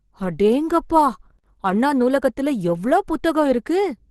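Speech throughout shows likely Opus compression in its hybrid speech mode, consistent with a low bitrate near 16 kbps; the audio sounds plainly muffled and hoarse, with the top end cut off.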